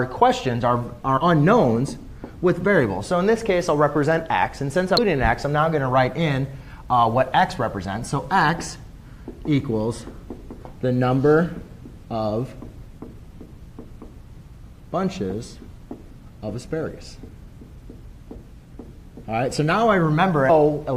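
Damaged data in the compressed stream corrupts three short stretches of frames, at 1.16 to 1.18 s, at 4.97 s and at 20.48 s. Each time, the decoder reaches bytes it cannot parse as valid frames, misreads or rejects them, and loses sync until it finds the next good frame header. Each error is heard as a brief chirp or blip, lasting only about 16 to 20 ms, that cuts into the sound.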